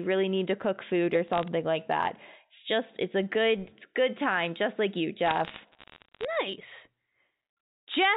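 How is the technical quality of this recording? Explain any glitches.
The recording comes through a telephone line, with sound limited below 4 kHz, and has two bursts of bit errors on a digital phone line. From 1.28 to 1.48 s, after "to cook food or" and before "like that", sharp ticks crackle over the speech. From 5.26 to 6.25 s, after "time just like you", the crackle returns. Flipped bits, roughly three in a thousand, corrupt single samples. Hits on sign or high bits produce the ticks.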